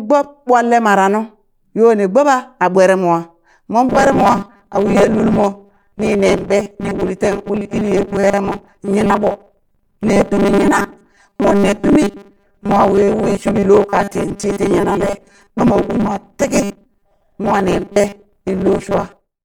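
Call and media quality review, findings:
Robotic sound from repeated short buffers, 3.89 s to the end: rigid metallic buzz at 200 Hz. Likely buffer underrun, with a 5 ms chunk looped over about half the audio.

Corrupt frame decoded, 18.66 to 18.70 s: brief chirp, blip or burst of noise. Damaged bits in a couple of frames, played anyway, so energy lands at the wrong frequencies.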